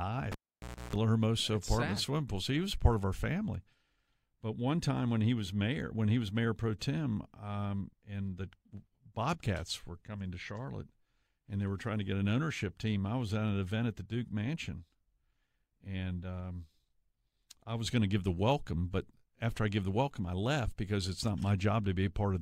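At 0.32 s the speech cuts off with a pop as a live cable is pulled and plugged in again. For about 590 ms the sound drops to near silence. Within that gap, about 310 ms of 60 Hz mains buzz sounds while only the plug's tip touches. Another pop marks the return at 0.96 s.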